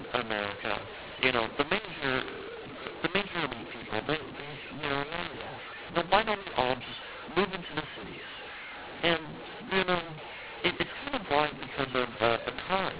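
From the first second to the end, the speech has mu-law and A-law mixed up: mu-law telephone samples decoded as A-law, so levels scramble, sounding harsh and gritty, with hiss filling the pauses.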